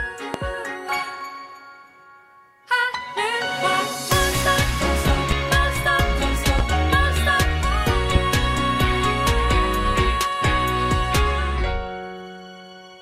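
Four loud pop events occur, at 0.34–0.37 s, 5.08–5.34 s (a double pop), 6.59–6.62 s and 8.15–8.19 s. Each is a sharp transient peaking at around 15 dB above the surrounding audio, which continues beneath it. The cause is likely a voltage step or pulse entering the signal chain, from a connector, switch, static discharge or driver glitch, with the downstream circuitry shaping it into a brief thump.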